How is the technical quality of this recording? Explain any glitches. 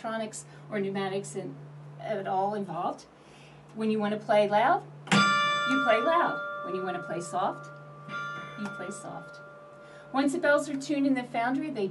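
Listening closely, nothing in the recording stood out as a technical problem, and there were no glitches to explain.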